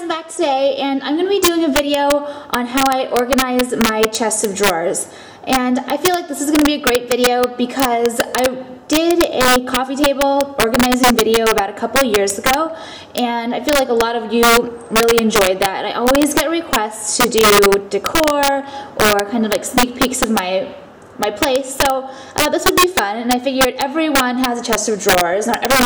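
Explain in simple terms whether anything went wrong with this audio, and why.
Something did go wrong: integer overflow runs through the whole clip. The loudest moments push the signal past its numeric limit, and instead of flattening out, those peaks wrap around to the opposite extreme. That makes sharp, violent cracks, harsher than the dull fuzz of ordinary clipping.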